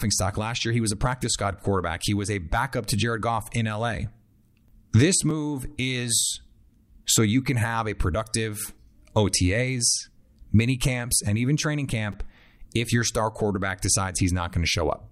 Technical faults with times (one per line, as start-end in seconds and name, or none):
5.30 repeated buffer
8.64 repeated buffer
12.12 repeated buffer